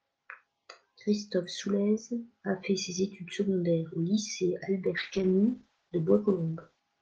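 At 4.87 s a single sharp click cuts through the speech, most likely from dropped samples: a couple of samples go missing, a fraction of a millisecond, so the waveform steps abruptly from one value to a later one. Nothing audible is lost. The spectrogram shows a thin vertical line spanning all frequencies, and the waveform shows a small discontinuity. Another such click recurs at 6.48 s.

From 4.98 s to 6.87 s comes a call bitrate drop. The Opus encoder falls from 32 kbps to about 11 kbps and stays near the bottom for roughly 1.8 s. With so few bits the coding turns coarse and the audio band narrows from 12 kHz to 8 kHz, so the speech sounds rougher, watery and duller. On a spectrogram the energy above 8 kHz disappears along a flat ceiling, and the harmonics below look smeared and blocky. They recover as the bitrate climbs back.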